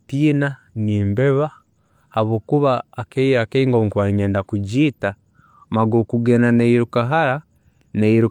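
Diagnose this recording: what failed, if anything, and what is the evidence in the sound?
Nothing in the signal chain failed: the speech arrives with steady level and continuous signal, and no stage from the wiring through to playback leaves an audible mark on it.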